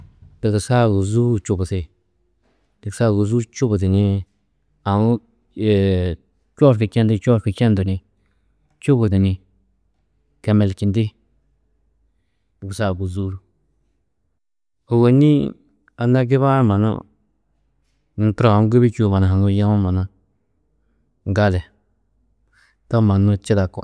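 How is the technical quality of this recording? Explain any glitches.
Nothing stood out as a technical problem on listening to this speech recording, so there are no glitches to explain.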